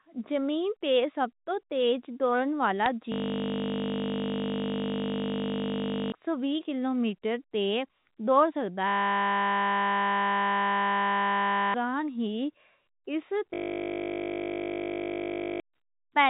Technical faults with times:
2.79-2.86 bit errors on a digital phone line
3.12-6.12 system hang loop
8.88-11.74 system hang loop
13.54-15.60 system hang loop

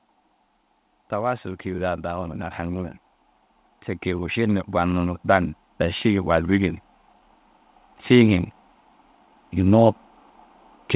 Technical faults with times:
1.16-2.97 automatic gain rising
4.04-6.77 automatic gain rising

